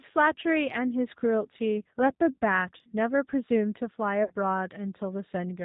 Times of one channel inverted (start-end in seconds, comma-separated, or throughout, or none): none